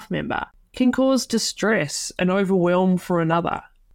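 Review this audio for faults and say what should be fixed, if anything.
From 1.7 s to 3.9 s the speech drops in speed by about 5.3% and in pitch by about 94 cents, just under a semitone, then snaps back at the end. Speed and pitch shift together, so the voice sounds slowed and detuned rather than just lower. This is likely a drift correction step, where clock-matching software changed the playback rate in one jump to manage its buffer level. To prevent it, make rate corrections in small, gradual increments, or lock both devices to a common clock so large corrective steps are never needed.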